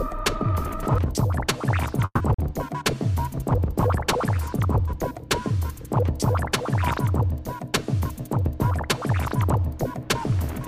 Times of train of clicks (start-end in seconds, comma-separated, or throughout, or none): none